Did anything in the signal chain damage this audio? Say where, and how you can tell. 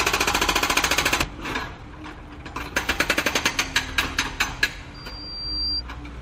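Yes. A skip ahead at 1.21 s comes from the network and jitter buffer stage. Playback jumps straight forward with no filler. Roughly 0.7 s of sound is missing, and the two sides are joined almost directly. This fits a stretch dropped in transit or discarded when the buffer overflowed, with later audio already waiting. The jump also cut the delay by about the same amount.

Right after it, from 1.32 to 3.65 s, comes a jitter buffer speed-up. The sound runs about 13% fast at unchanged pitch, and it feels hurried. The buffer held more audio than its target, so the receiver trimmed short pitch-period pieces again and again. Roughly 0.3 s was removed in total to bring the delay back down.

A loudspeaker feedback squeal occupies 4.94 to 5.82 s. It is an acoustic loop at playback, not a digital fault. A single tone near 4.7 kHz swells over about 0.7 s until it is about as loud as the sound itself. 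The microphone was picking up the loudspeaker it feeds, and at that frequency the loop gain passed one. The tone grew until it was limited or the loop was broken.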